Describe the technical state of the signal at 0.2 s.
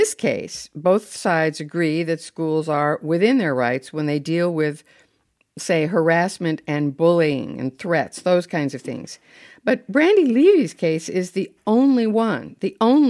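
At 0.2 s the speech signal is intact, with no technical fault present at that moment.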